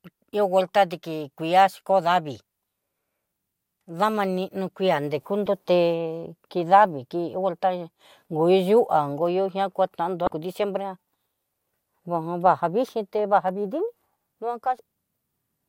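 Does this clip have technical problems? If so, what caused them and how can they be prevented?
Yes. Brief glitches cut into the speech at 5.46 s, 10.24 to 10.28 s and 14.76 to 14.80 s. These come from damaged data in a compressed stream, where corrupt bytes make the decoder misread frames and lose sync. Checksum-verified storage and transfer would prevent it.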